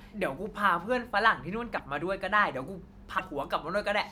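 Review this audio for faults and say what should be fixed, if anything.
Two brief garbled breaks interrupt the speech, at 1.77 to 1.80 s and 3.18 to 3.21 s, each lasting about one 26 ms frame, and the sound skips forward at each. The likely cause is a broken MP3 bit reservoir: frames went missing, and the next frame, reaching back for its borrowed data, decoded bytes from a different frame instead. To prevent it, cut or splice MP3 streams only at points that keep the bit reservoir intact, or edit the uncompressed source and re-encode.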